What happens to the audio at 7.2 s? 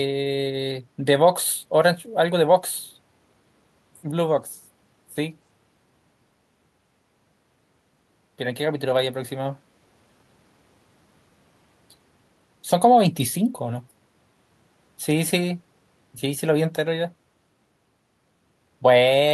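Nothing goes wrong at 7.2 s: the speech carries on intact through that moment, with no dropout, click or distortion.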